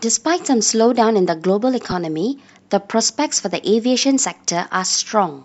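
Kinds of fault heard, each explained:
Lost LE Audio frames: At 1.91 s about 10 ms of the Bluetooth LE Audio stream goes missing, which fits a single lost frame. The LC3 decoder fills the gap by repeating the previous spectrum with randomised signs, so the speech briefly turns into a noisy smear. On a spectrogram the harmonic lines blur into a thin vertical band of diffuse energy. On the waveform a short stretch loses its regular periodic shape.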